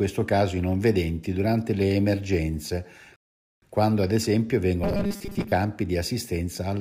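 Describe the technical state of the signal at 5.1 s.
At 5.1 s you're right in the middle of robotic sound from repeated short buffers, which runs from about 4.84 to 5.52 s. The speech turns into a stiff, metallic buzz locked at 200 Hz. That pitch fits a 5 ms chunk being looped over and over, likely because new audio arrived too slowly and playback filled the gap by repeating the last buffer. Around half of what you hear there is repeats, so chunks of real audio are simply skipped.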